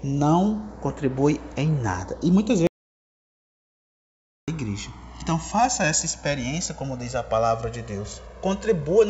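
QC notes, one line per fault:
Throughout: channels drifting apart. The left and right channels run on slightly different clocks, off by a few hundred parts per million. The delay between them grows to about 2 ms by the end. Summed to mono, comb notches sweep slowly, heard as slow flanging.
2.67 to 4.48 s: audio dropout to silence. The sound stops abruptly and returns about 1.81 s later. The gap is silent with no room tone. The likely cause is lost input, with the recorder writing silence meanwhile. Anything during the gap is gone.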